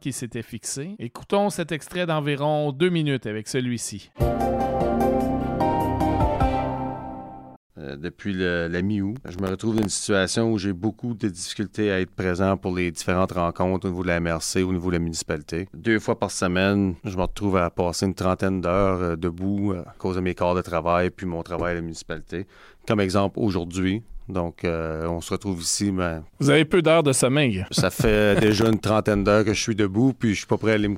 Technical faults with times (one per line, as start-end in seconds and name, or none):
9.16-10.04 processor overload crackle
28.42-28.73 processor overload crackle